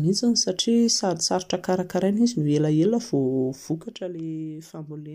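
From 3.55 to 4.15 s, a level drop of about 10 dB is applied in unsmoothed steps, at roughly 150 per second, rather than as a continuous ramp. Each jump leaves a tiny click, producing zipper noise, a fast buzzy ticking riding on the speech as it fades.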